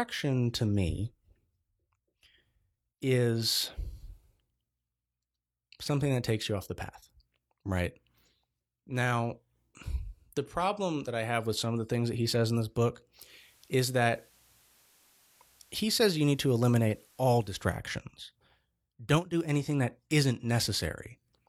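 From 13.20 to 17.81 s the receiver loses its digital signal and blends to the station's FM analogue broadcast over 128 ms, then back: digital radio blending to analogue. Faint hiss appears under the speech, and level shifts about 2 dB.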